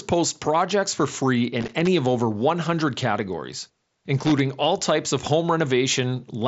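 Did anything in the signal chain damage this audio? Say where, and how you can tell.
Yes. Loose connector crackle appears twice, from 1.61 to 1.87 s and from 4.18 to 4.40 s, and it points to the analogue wiring ahead of the headset's wideband mSBC link. Each burst is an irregular, scratchy crackle: a worn or dirty contact keeps making and breaking as it shifts, chopping the signal on and off, with pops wherever DC sits on the line. The codec carries these bursts through; it doesn't create them.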